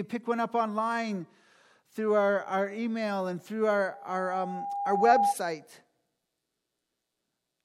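From 3.92 s to 5.35 s, a microphone is picking up the loudspeaker it drives, and near 803 Hz the loop gain tops unity. The result is loudspeaker feedback squeal: a steady tone swelling over roughly a second and a half until it rings out louder than the speech.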